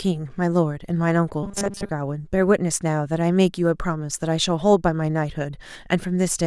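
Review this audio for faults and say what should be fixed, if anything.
From 1.43 to 1.89 s the speech collapses into a rigid, metallic buzz at 200 Hz that only loosely follows the words: robotic sound from repeated short buffers. The likely cause is audio arriving too slowly, so the playback side keeps looping the last chunk instead of waiting. A 200 Hz buzz fits a chunk of about 5 ms, and most of that stretch, around seventy percent, is filler rather than real audio. To prevent it, give the audio path more buffering headroom so fresh samples always arrive in time.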